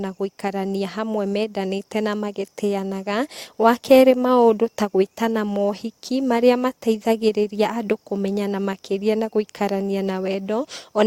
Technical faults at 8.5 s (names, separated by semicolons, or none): none